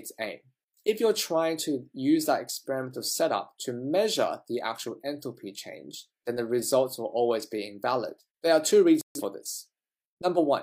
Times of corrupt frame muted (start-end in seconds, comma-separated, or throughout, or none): 9.01-9.21